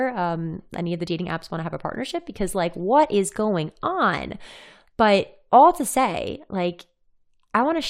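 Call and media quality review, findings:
Nothing to flag on this speech recording, since no faults turned up anywhere in the listen.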